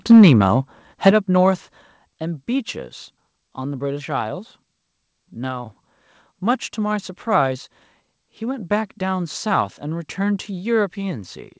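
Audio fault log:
0.10–0.33 s and 1.06–1.10 s, microphone overload: the loudest syllables come out harsh and crackly, roughly 3 dB over at first and about 5 dB over the second time. Around a sixth, then a tenth, of the samples have their tops flattened, likely from input gain set too hot.
0.12 s, 1.11 s and 2.13 s, microphone volume stepped down: the speech and the background drop together in sudden single steps of about 2 dB, 7 dB and 4 dB. The first two land right on the distorted peaks, likely the call software pulling the input gain down after it caught clipping. Everything is also band-limited to 8 kHz, as G.722 on a call path would be.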